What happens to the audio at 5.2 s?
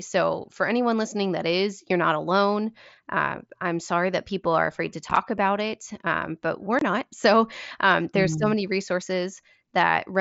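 Between about 5.09 and 5.17 s, right after "people are afraid to" and before "about it um but", the speech breaks into a brief rough, chopped stutter with abrupt edges where it cuts out and back in. This is unconcealed Bluetooth headset packet loss on the mSBC link: about 30 ms of voice went missing in short gaps scattered over roughly 75 ms, none longer than 7.5 ms, which fits four lost frames. Nothing filled those gaps, so each left an abrupt hole.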